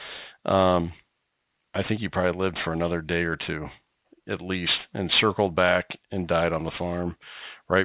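From start to finish the speech carries aliasing: it was brought down to a low sample rate without removing content above the new limit, which points to a drop from 48 kHz to 8 kHz. Everything above 4 kHz folds back below it, so sibilants come out gritty and metallic with harsh, unrelated tones, sitting only about 15 dB under the speech. Simple band-limiting would sound dull and muffled; here the top is bright and filled right up to 4 kHz with false energy.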